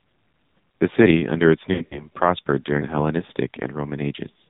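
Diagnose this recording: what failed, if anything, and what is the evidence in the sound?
Buzzy, synthetic and dull throughout, with nothing above 4 kHz. This points to the codec stage: AMR narrowband mobile codec, heavily degraded, consistent with its low 5.9 kbps mode.

From 1.74 to 2.06 s the sound warbles, smears and dips in scattered gaps. This is network-stage lost AMR speech frames: about 120 ms concealed, with the longest run 60 ms.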